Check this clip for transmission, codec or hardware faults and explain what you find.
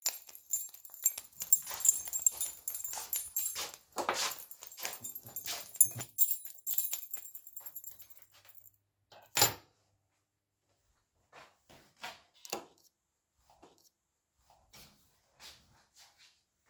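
One transmission fault is present: a stream segment repeated. At 13.62 s the player jumps back, with a brief blip at the splice, and replays about 1.0 s of the preceding audio through 14.62 s. This fits the same stream segment being fetched or queued twice.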